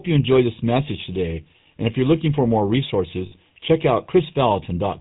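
Channel delay (comb filtering) runs through the whole of this speech recording: one channel lags the other by only about a third of a millisecond, and when the two are summed to mono the shared sound cancels at evenly spaced frequencies starting near 1.5 kHz, leaving a hollow, phasey colour. The GSM full-rate codec is also present throughout and plainly audible. Its gravelly, buzzy roughness and the missing content above 4 kHz point to the 13 kbps full-rate codec, which rebuilds the voice from a vocal-tract model driven by a thinned pulse excitation. Lost GSM frames occur from 3.26 to 3.33 s, a gap of about 60 ms that fits three 20 ms frames. Over that span the decoder repeats the last good frame, so the sound hangs as a brief, rough metallic ring.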